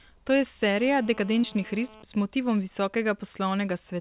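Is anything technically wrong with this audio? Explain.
Yes, two faults stand out in this speech recording.

From 0.77 to 2.03 s there is GSM phone buzz. A 2G handset nearby, in an active call, transmits in bursts about 217 times per second. The audio circuitry rectifies those radio pulses into a waveform at that rate. The result is a hard, raspy 217 Hz buzz rich in harmonics, sitting about 24 dB below the speech. It stays nearly steady through the interval and has no relation to the speech.

Between 1.42 and 1.45 s there is a short concealed packet loss. About 20 ms of audio failed to reach the decoder in time. The receiver covered the gap by extending the preceding sound for roughly 11 ms and then crossfading back into the real signal. This is heard as a brief smear or wobble, and a short consonant at that point can disappear. The whole call is band-limited to 4 kHz, which points to a narrowband G.711-type codec.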